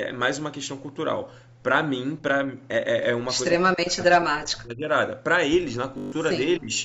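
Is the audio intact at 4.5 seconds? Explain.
No. At 4.5 seconds the speech sits inside a dip running from 3.59 to 4.89 s, with the level falling by as much as about 40 dB. This is likely speech suppressed in double talk: with both sides talking at once, the echo canceller could not separate the local voice from loudspeaker echo and turned both down. Unlike a network dropout's abrupt silent gaps, the voice here dips.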